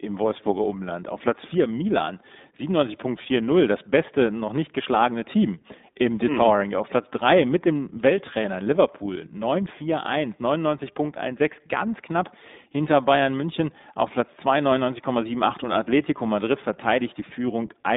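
From start to end, the speech carries the sound of the iLBC codec. The band is cut to roughly 200 Hz to 3.7 kHz, with nothing above 3.8 kHz, so sibilants lose their edge and the low end is thin. Each 20 ms frame is coded on its own, and the damage is plainly audible: a rough, slightly synthetic texture on every syllable, consistent with a rate near 15.2 kbps.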